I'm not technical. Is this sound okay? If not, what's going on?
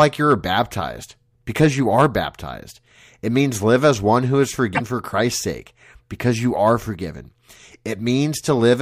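No, there's one glitch in this speech clip, from about 4.72 to 4.81 seconds, a brief chirp or blip lasting under a tenth of a second. It's damaged data in a compressed stream. A small patch of the compressed file got scrambled or lost, so the player couldn't make sense of those few bits. It briefly lost its place and had to hunt for the next readable chunk, and that stumble is the sound you hear.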